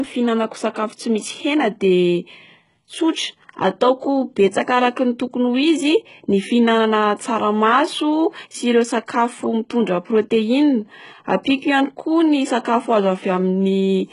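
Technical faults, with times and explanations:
Throughout, HE-AAC compression: treble is copied up from lower bands, so s sounds turn lispy and metallic, with nothing above 11.1 kHz; likely a very low-bitrate encode, around 12 kbps.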